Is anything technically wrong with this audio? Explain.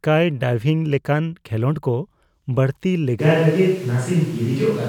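Yes. At 3.22 s the speech abruptly turns roomy and hollow, losing low-end body, and stays that way to the end of the clip. Its loudness barely changes, but background noise rises to roughly 25 dB below the speech. This sudden change in character most likely comes from a switch to a distant microphone: the close microphone's feed dropped out or was left out, and the sound captured further away carries more room reflections and less bass.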